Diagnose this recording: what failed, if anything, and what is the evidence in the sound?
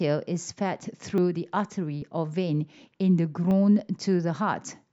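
Likely a dropped buffer (overrun) at the driver: overwritten samples make the speech jump ahead at 1.18, 2.02 and 3.51 s, losing roughly 10 to 20 ms each.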